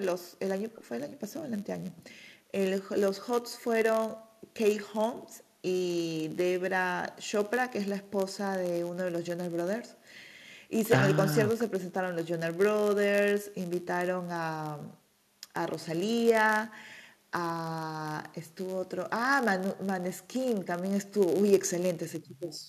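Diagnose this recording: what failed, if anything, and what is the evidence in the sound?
Block size mismatch (padded) in the buffer stage. A 91.5 Hz buzz runs throughout. Zero-filled block tails slow the speech to 0.996x with timbre intact.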